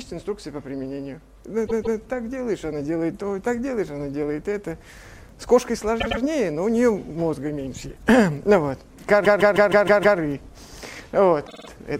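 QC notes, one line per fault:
1.66–1.97 s, repeated frames: a 157 ms chunk plays twice more, a short stutter adding about 0.31 s.
6.00–6.21 s, repeated frames: a 105 ms block comes back twice, a quicker hiccup adding 0.21 s.
9.24–10.18 s, repeated frames: the same 157 ms block loops six extra times, a long stuck-record stretch adding 0.94 s.
11.46–11.68 s, repeated frames: a tiny 52 ms block repeats four times, a fast flutter adding 0.21 s.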